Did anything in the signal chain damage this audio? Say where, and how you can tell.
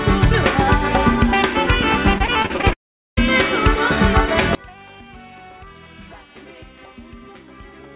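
Yes. At the network stage, repeated packet loss (robotic sound) runs from 2.18 to 2.73 s. Seven short gaps, the longest 36 ms, are patched by repeating the last sound, leaving a choppy texture.

From 2.73 to 3.19 s the sound smears into a fading buzz and then about 0.4 s of silence before resuming with material missing. This is most likely a long network dropout with concealment running out.

From 4.55 s to the end, the mono sum drops by about 26 dB and centred content nearly vanishes. This points to one channel inverted, likely a polarity error in wiring or playback.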